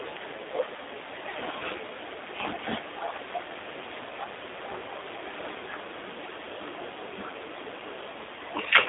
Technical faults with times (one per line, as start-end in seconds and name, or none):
0.00-8.88 G.729 codec